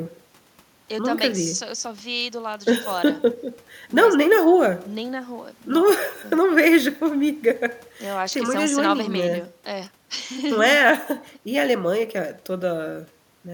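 No technical faults occur at any point in the recording, so there is nothing to describe in time order.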